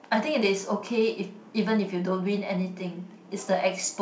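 No faults can be heard anywhere in this recording.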